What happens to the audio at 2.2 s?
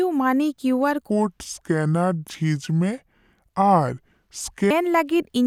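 At 2.2 s the speech sits inside a section at the wrong speed, running from 1.09 s to 4.71 s. Playback there is at 0.71 times the original rate, likely because that stretch was played or resampled against the wrong clock, so the voice drops by roughly seven semitones and slows down together. Speed and pitch fall in step, which sets it apart from a pitch-shift fault, where pitch moves but timing stays normal.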